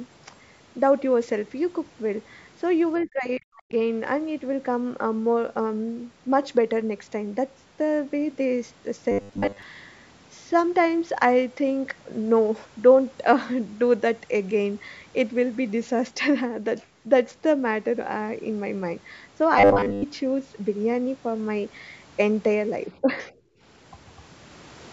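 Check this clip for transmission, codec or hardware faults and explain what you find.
Four kinds of fault are audible in this speech clip, all around echo handling and buffer delivery.

At 2.96 to 3.07 s, a faint second voice briefly surfaces under the talker, roughly 30 dB down. This is the other side's voice leaking through: the far end's audio, played on the talker's loudspeaker, was picked up again by the microphone, and the echo canceller likely failed to remove all of it. The fragment is short, a scrap rather than a sustained second stream.

From 3.06 to 3.72 s the talker's level collapses, dropping by around 40 dB at its deepest over roughly 0.7 s. A smaller dip follows at 23.01 to 23.31 s, about 10 dB deep and lasting roughly 0.15 s. Both are speech suppressed in double talk. With both ends speaking at once, the canceller likely could not tell the local voice from the loudspeaker echo and attenuated everything. 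The first event nearly silences the talker. The second only pulls the voice back briefly.

At 9.11 to 9.62 s and again at 19.58 to 20.04 s the voice turns into a rigid, metallic buzz pitched at 100 Hz. This is robotic sound from repeated short buffers. Fresh audio likely arrived too rarely, so playback looped the most recent fragment, with most of each stretch being repeats. A 100 Hz buzz corresponds to a loop period of 10 ms, which points to a 10 ms buffer being replayed. The speech contour is still vaguely traceable underneath.

At 23.44 to 23.59 s the room tone drops by about 18 dB for roughly 0.15 s, then recovers. This is background gated by the echo canceller. Immediately after the second double-talk dip, the canceller clamped the microphone while the loudspeaker was active, and then it let go. The gap is audible as the ambience switching off and back on. The missing lowest bass comes from the call's microphone processing and is not a fault.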